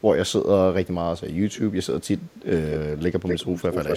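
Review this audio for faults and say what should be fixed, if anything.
A delayed, ghostly copy of the speech trails behind it at 1.52–1.59 s, 2.01–2.07 s, 2.24–2.45 s and 2.71–2.77 s, and again from 3.25 s to the end. It sits about 285 ms behind in the first three and about 246 ms behind later. It starts faint, drops fainter still in the middle, then grows to nearly the level of the speech by the final stretch. This is echo leak, likely from a loudspeaker-side echo canceller passing through what its microphone captured. Fix the far end's echo cancellation, or have that caller use a headset.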